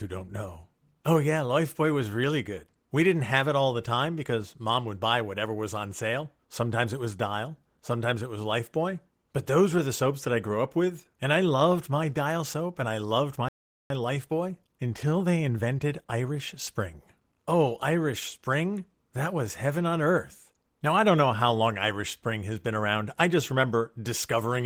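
Right after "and I loved my", at 13.49 s, the speech just drops out for about 0.42 s and picks up again at 13.90 s. That's a playback stall. The silence lands mid-phrase rather than at a natural pause, which gives it away. The likely cause is that the player ran dry of buffered audio, or its output thread got held up, so nothing went out until it recovered.

Then, from 13.90 s to 16.90 s, there's a time-compressed catch-up. The player is working off the backlog the stall left behind by snipping out tiny slices and cross-fading over the joins. That runs the speech about 1.1 times faster for those three seconds while keeping the pitch where it was. You hear it as the talker sounding a bit hurried.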